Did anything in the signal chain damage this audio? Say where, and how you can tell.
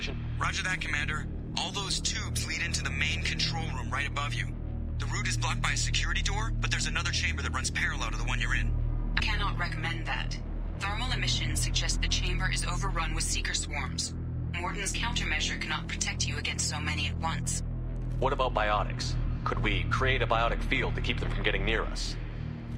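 Yes. At 9.20 s compressed frames are skipped at the decoding stage: about two 32 ms frames are gone, so the sound jumps ahead by roughly 70 ms at one join. A dropout would leave a gap; here nothing is missing in time, just abruptly advanced.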